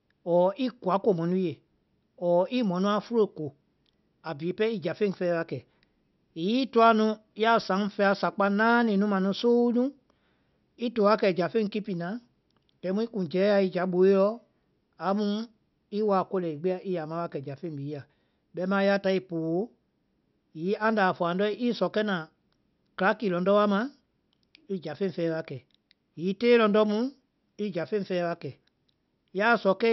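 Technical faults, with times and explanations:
No technical faults detected in this speech recording.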